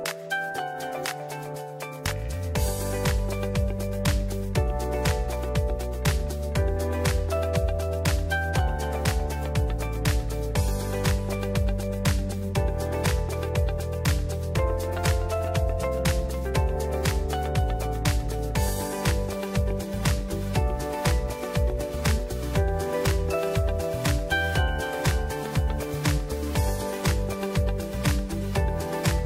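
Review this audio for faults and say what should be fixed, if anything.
Nothing in the recording calls for a fix: the signal holds steady throughout, with no audible disruption, distortion or level problem anywhere in its run.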